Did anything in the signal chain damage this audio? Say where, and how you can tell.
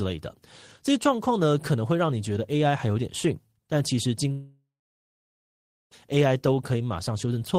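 Yes. At 4.31 s the speech breaks into a fading buzz, goes silent for about 1.2 s, then resumes at 5.94 s with roughly 1.6 s simply gone. That's most likely a long network dropout: packets stopped arriving, concealment stretched the last sound briefly, then gave up.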